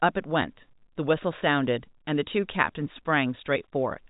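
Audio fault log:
No faults heard; telephone-band speech, nothing above 3.8 kHz.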